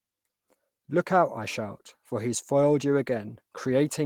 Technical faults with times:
none

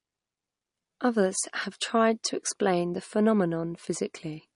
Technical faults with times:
0.00-4.55 MP3 compression

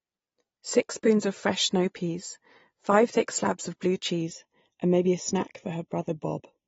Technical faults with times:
0.00-6.68 AAC compression
4.21-6.68 channel delay (comb filtering)

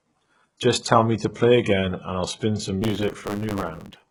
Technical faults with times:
0.00-4.11 HE-AAC compression
2.81-4.11 block size mismatch (truncated)

